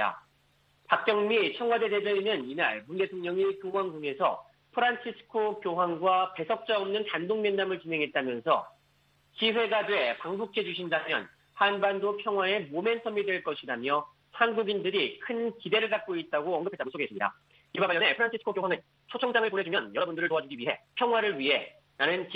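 From 16.58 s to 21.04 s the audio runs at about 1.81 times its surrounding pace while its pitch stays put, giving a rushed time-stretched section. This is likely software compressing that stretch to fit a length by dropping short pieces.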